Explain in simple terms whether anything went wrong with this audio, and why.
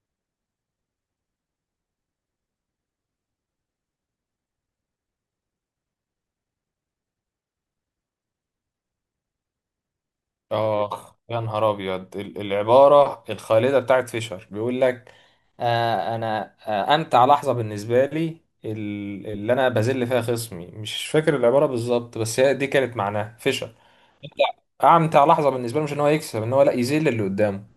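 From 15.26 to 17.60 seconds the speech suddenly runs about 6% fast and sits about a semitone higher, then snaps back. From 21.05 to 21.60 seconds the opposite happens: it slows by about 6% and drops roughly a semitone. This is a drift correction step. Two devices' clocks disagreed, and the software keeping them matched likely jumped the playback rate in one go to refill or drain its buffer, shifting speed and pitch together.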